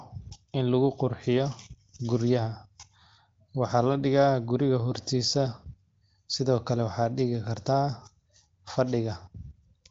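Nothing goes wrong here, just speech carried over the AMR wideband (HD Voice) codec, with the sound topping out around 7.5 kHz the way that path does, and nothing along the way worth flagging.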